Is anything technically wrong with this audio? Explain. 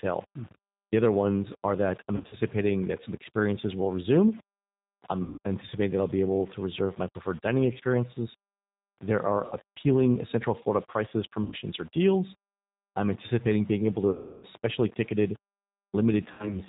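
Yes. Two faults are present.

Throughout, the speech carries G.729 codec damage at 8 kbit/s, and it is plainly audible. The codec rebuilds each short frame from a vocal-tract filter, a pitch predictor and a few sparse pulses, so the voice sounds rough and slightly synthetic. Nothing above 4 kHz gets through. A plain low-pass filter would only dull the top end. The buzzy, pulse-built texture is what points to this codec.

There are six stretches of VoIP packet loss concealed by the speech codec: 2.16–2.36 s (between "ones are that I'm" and "that some experiences will"), 5.22–5.39 s (just before "anticipating that I'll be"), 9.46–9.56 s, 11.44–11.55 s, 14.11–14.46 s (after "anticipating being able to"), and 16.33–16.60 s. The missing audio runs from 60 to 320 ms per stretch. The losses at 2.16 s are scattered in short runs. In each gap the decoder stretches its last pitch and filter with falling gain, which produces a fading buzz or coloured hum. 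Because each frame builds on the previous one, the voice stays weak briefly after the audio returns. A simple dropout would instead go silent or click, with no tonal smear and no slow recovery.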